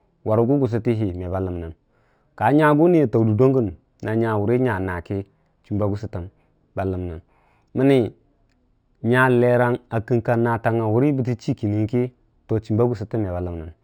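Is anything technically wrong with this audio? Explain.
Yes. Throughout the speech there is imaging from linear upsampling. The audio was raised from 12 kHz to 48 kHz by straight-line interpolation, a weak filter that dulls the top of the band and leaves mirror images, the first spanning 6 kHz to 12 kHz, roughly 40 dB down, heard as faint metallic shimmer on sibilants.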